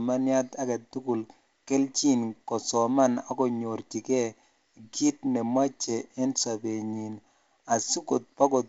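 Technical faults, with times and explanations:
No technical faults are present: the speech carries the band-limited character of G.722 wideband telephone coding, with nothing above 7.7 kHz, and its slightly noisier lower band fits the 48 kbit/s mode.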